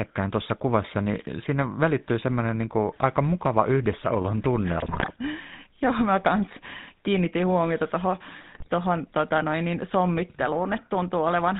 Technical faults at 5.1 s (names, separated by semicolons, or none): GSM full-rate codec; GSM bit errors